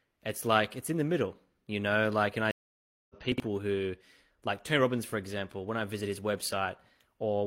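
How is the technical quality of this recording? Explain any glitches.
The recording has two glitches, both close together in the first half of the speech.

From 2.51 to 3.15 s there is a stream reconnect. The connection dropped, playback went silent for about 583 ms, and a fresh decoder started partway into the stream. When the speech returns it has jumped ahead by roughly 0.7 s, so a stretch is simply missing. The opening frame fades in. On a waveform this shows as a flat, empty gap followed by a soft ramp rather than a sharp onset. A spectrogram shows a blank vertical band.

Just after, from 3.32 to 3.40 s, there are chunks out of order. One 20 ms chunk arrived late and plays three chunks after its proper place. Nothing is lost, but the sequence is scrambled, leaving three hard joins and a brief jumbled flutter. The waveform shows abrupt discontinuities at each splice. The spectrogram shows thin broadband vertical lines and a short stretch where the harmonic patterns break and restart.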